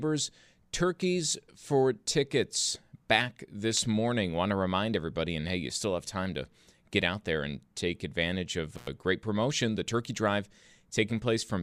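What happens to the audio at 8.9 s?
Right around there the speech drops out briefly: an intermittent contact from 8.76 to 8.87 s, just after "and take advantage of" and before "great promotion". A loose plug or cable lost contact for roughly 96 ms, so the signal path opened and the audio vanished. You hear crackle as the connection breaks and again as it reseats, with faint hiss in the gap.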